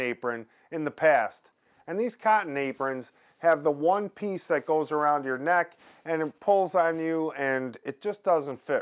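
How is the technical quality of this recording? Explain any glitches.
No glitches can be heard; the signal stays steady, continuous and undistorted for its whole duration.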